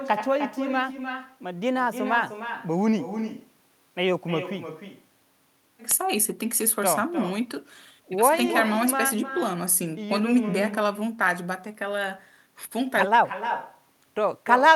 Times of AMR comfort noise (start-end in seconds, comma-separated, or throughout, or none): none